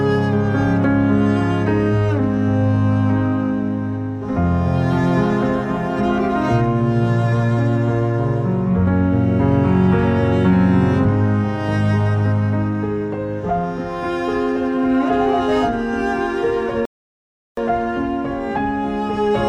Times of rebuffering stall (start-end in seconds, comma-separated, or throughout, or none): 16.85-17.57